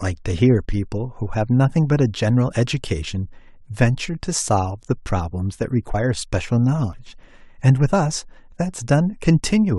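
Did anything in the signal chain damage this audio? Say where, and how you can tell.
Yes, at the codec or storage stage: compressed frames skipped at 5.93–5.95 s and 6.93 s, each jumping ahead roughly 50 ms. Whole frames went undecoded, so the audio jumps ahead by the length of the missing frames.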